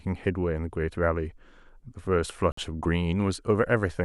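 Speech clip with one Bluetooth stall at 2.52 s: the sound drops to silence for 54 ms, then resumes, likely the headphone buffer running dry while delayed packets were resent.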